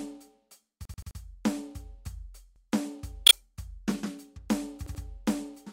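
Repeated buffer at 0.85 to 1.20 s: the same 85 ms slice of music plays four extra times in a row, each copy joined to the next with a hard edge, giving a rapid stutter. New audio failed to reach the output in time, so the device replayed its last block. That block length fits a 4096-sample buffer. The music then resumes where it left off, with nothing skipped.

Repeated buffer again at 2.56 to 2.65 s, this time a single extra play of the same 85 ms length, heard as one brief hiccup.

Damaged data in a compressed stream at 3.26 to 3.33 s: a short glitch breaks through the music. Part of the encoded stream was corrupted there, so the decoder misread those frames and lost sync until it found a valid frame header.

Repeated buffer at 4.86 to 5.04 s: the 85 ms slice sounds twice more, a shorter stutter than the first.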